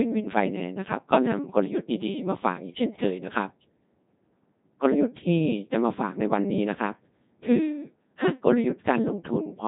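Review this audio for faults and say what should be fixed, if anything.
Codec 2 vocoder damage runs throughout. The speech sounds robotic and buzzy because the decoder rebuilds it from sine waves using only pitch, voicing, energy and envelope. The damage is heavy, with nothing above 3.8 kHz, which fits a 2.4 kbit/s mode. To avoid it, send or record over a wideband codec.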